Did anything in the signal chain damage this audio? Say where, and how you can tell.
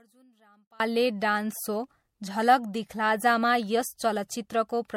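Yes. The whole speech clip sounds swirly, smeared and hollow, with blurred consonant attacks and nothing above 16.5 kHz. This is generation loss at the codec stage, likely from MP3 being re-encoded a few times at a rate that fits 64 kbit/s, each pass stacking new quantisation noise.

From 0.0 to 0.8 s the speech nearly disappears in mono, dropping by about 32 dB and leaving only a faint residue. One channel inverted is the likely cause, probably a polarity swap in the wiring, so the centred material cancels when both channels are summed.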